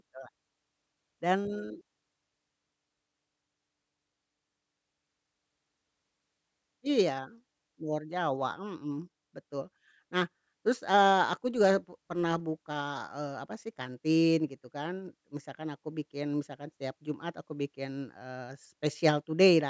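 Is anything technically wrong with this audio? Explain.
No, nothing is technically wrong with this audio.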